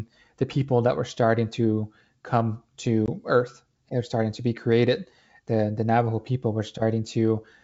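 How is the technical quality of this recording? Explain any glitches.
One real glitch, on a G.722 wideband call at 64 kbit/s. From 3.06 to 3.09 s, just after "starting to come", there's ADPCM packet loss: about one 20 ms packet dropped to silence, leaving the decoder's predictor out of step, so the audio returns slightly distorted before settling.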